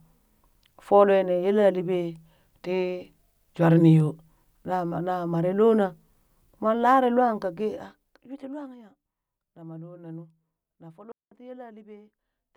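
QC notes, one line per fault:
7.36–8.88 s, zipper noise: after "moon lare lwaan" the level falls about 20 dB in unsmoothed 1 dB steps, roughly 15 per second, so each step ticks.
11.12–11.32 s, digital wireless dropout: after "na nuu na foo" the speech mutes for 198 ms. The link likely lost data, leaving a clean, noiseless hole.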